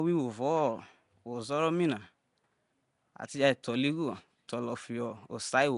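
Speech throughout carries a rough, hissy halo and smeared, underwater quality, likely Nellymoser compression, Flash's old microphone codec, at a rate around 44 kbps. Weak bands are noise-filled rather than coded. A spectrogram shows a hard ceiling near 10.6 kHz and grainy, patchy texture between harmonics.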